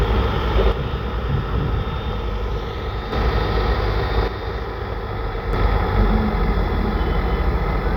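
From 0.72 to 3.12 s and again from 4.28 to 5.53 s, the sound abruptly drops by about 6 dB and then snaps back. This is most likely one channel dropping out: with one stereo side lost, the mono sum keeps only half the shared content.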